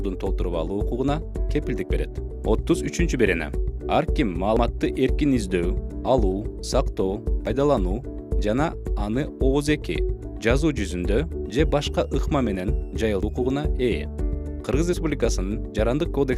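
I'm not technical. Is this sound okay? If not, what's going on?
No. There are sudden skips at 4.57, 7.47, 13.23 and 14.93 seconds. Each is a jump where the sound skips ahead, losing a tenth of a second or less, except about 0.15 seconds at 13.23. This is likely a dropped buffer (overrun): the recording program fell behind and lost a chunk.

From 11.45 to 13.67 seconds a faint, high whistle sits under the sound. Its pitch drifts between about 2.5 and 2.9 kHz. This is a switching supply whistle, coming from a switching power supply running at an audible pitch.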